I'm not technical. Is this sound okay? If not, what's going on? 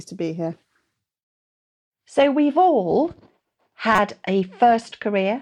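No. There is one short glitch in this speech, from about 3.96 to 3.99 seconds. It is a corrupt frame decoded. Speech gets packed into small chunks called frames. Here a few of those chunks were damaged, but the player played them anyway. The damaged data put sound at the wrong pitches. So for a few hundredths of a second you hear a sharp chirp or burst of noise. It is fairly loud.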